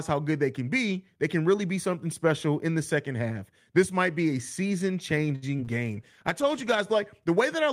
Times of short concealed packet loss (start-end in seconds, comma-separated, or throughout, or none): 5.56-5.69